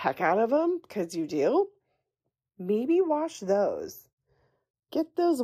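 Speech, with the two channels drifting apart throughout. Each channel appears to come from a separately clocked device, with a mismatch of around 70 ppm, so the offset between them creeps up to roughly a third of a millisecond by the end. Summed to mono, the resulting comb notches sweep slowly across the spectrum, giving a gradual flanging colour to the speech.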